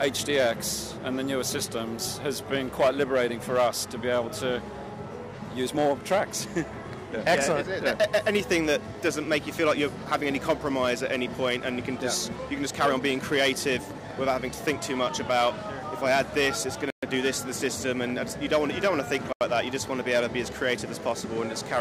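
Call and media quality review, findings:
Dropouts to silence at 16.90 s (124 ms) and 19.33 s (82 ms). Sound resumes after each gap. Likely Bluetooth stall: delayed packets emptied the headphone buffer until resends arrived.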